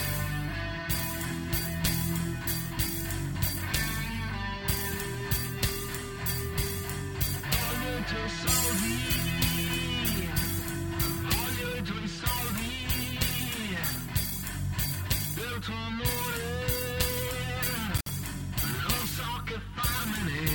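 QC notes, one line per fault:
17.97–18.09 s: intermittent contact. The signal drops out for about 57 ms, with crackle where the connection breaks and remakes and faint hiss in the gap. A loose plug or cable briefly opened the path, and the scraping contact produced the edge clicks.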